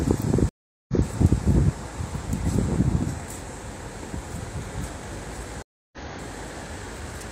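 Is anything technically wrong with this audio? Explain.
Yes. Two stream reconnects occur, at 0.49–1.06 s and 5.62–5.98 s. Each time the connection dropped and a fresh decoder started mid-stream: about 395 ms of silence, then a replay 171 ms earlier; later, 304 ms of silence, then a jump roughly 0.3 s ahead.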